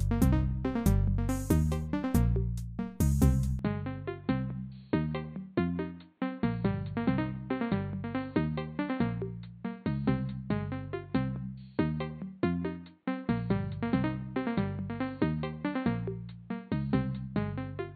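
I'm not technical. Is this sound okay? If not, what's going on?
No. From 3.59 s to the end, the sound turns duller and boxier, drops somewhat in level, and carries a new background noise that sits well below the sound itself. Nothing above 4.4 kHz comes through after that point, and the change happens with no gap. This is an input switched to a poorer device: the system likely changed microphones mid-recording, and the replacement passes a narrower range and brings its own tone and noise.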